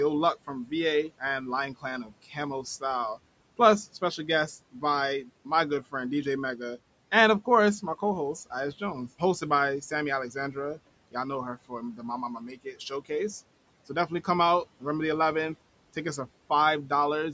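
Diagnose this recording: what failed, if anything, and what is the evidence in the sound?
The failure sits in call processing: speech cut by the noise suppressor. At 2.04 to 2.13 s, again from 11.68 to 12.03 s just after "know her", and from 12.39 to 13.1 s, the speech is pulled down by about 9, 17 and 15 dB, so syllables sound swallowed. The suppressor mistook quiet speech for the room noise, which sits about 22 dB below the speech, and attenuated it. Unlike a network dropout, the sound never falls to silence or glitches abruptly. It fades as a gain reduction.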